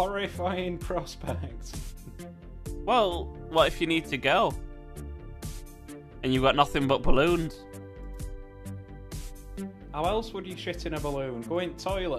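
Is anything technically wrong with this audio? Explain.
No, no technical faults found.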